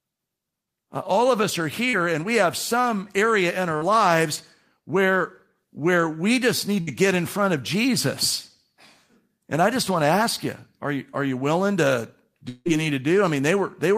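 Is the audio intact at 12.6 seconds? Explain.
No. From 12.49 to 12.67 s the speech turns into a buzzy continuation of the last sound, fading over about 160 ms, then roughly 20 ms of silence before speech returns, with about 160 ms of the original simply gone. This is likely a long network dropout: audio stopped arriving, so the receiver stretched out what it last had to cover the gap, then gave up, and playback resumed further on without the lost stretch.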